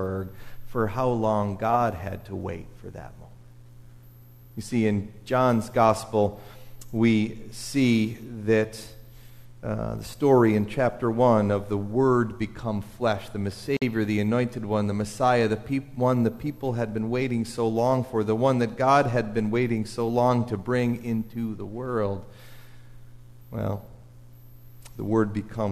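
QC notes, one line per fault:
13.77–13.82 s, gap at a join of encoded pieces: the sound drops out into a silence of about 51 ms, with edges softened by the codec, then resumes exactly where it stopped, so nothing is lost and it reads as a brief hole. Two separately encoded pieces were butted together without trimming, leaving the first piece's padded final frame and the second piece's encoder start-up delay in place as dead air.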